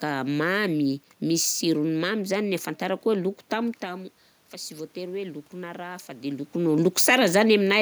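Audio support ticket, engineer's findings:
Voice and room noise swelling together, 3.81–6.59 s, after "ahafantarako loko". Automatic gain rising: input dropped about 13 dB as talker moved back, AGC slowly added about 5 dB.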